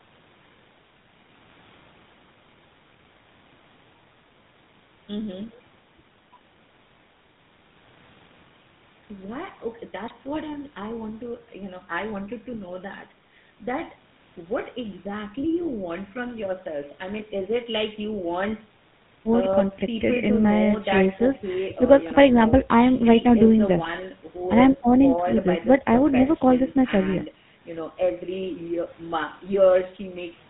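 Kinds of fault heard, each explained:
GSM full-rate codec, throughout: the speech is rebuilt from a vocal-tract model driven by sparse, regularly spaced pulses, leaving a plainly audible buzzy, gravelly roughness and nothing above 4 kHz, which fits the 13 kbps GSM full-rate coder.
GSM bit errors, at 10.06 to 10.14 s and 23.83 to 24.04 s: corrupted bits reach the speech decoder, so filter, pitch or gain values come out wrong for 4 frames and then 11 frames, and the speech breaks into brief squawks and gargling, longer in the second burst.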